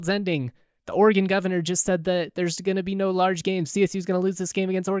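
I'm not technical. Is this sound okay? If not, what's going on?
Yes, the recording is technically sound, with no faults to be heard anywhere in it.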